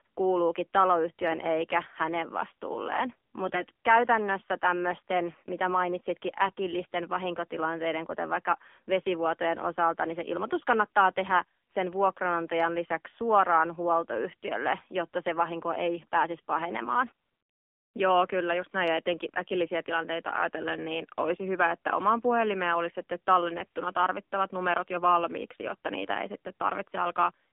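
Throughout the clip the speech sounds buzzy, boxed-in and plainly synthetic, with no low body and no air on top. The sound is confined to roughly 250 Hz to 3.5 kHz. This is the AMR narrowband mobile codec. The speech is rebuilt from a vocal-tract model fed by a few sparse pulses per subframe, and the degree of artificial buzz points to one of the lower modes, around 7.4 kbps. Nothing above 4 kHz survives the 8 kHz sampling.

From 3.46 to 3.62 s the speech turns suddenly hoarse and gargly, keeping its rough pitch and loudness, then clears again. A shorter scratchy burst follows from 6.48 to 6.52 s. Both are AMR bit errors. On a weak radio link a few percent of the less protected bits in each frame arrived flipped, yet the checksum over the essential bits still passed. The decoder therefore played the frames instead of concealing them. Misplaced excitation pulses and slightly wrong gain and spectral values caused the roughness, which fits about five 20 ms frames in the first burst and three in the second.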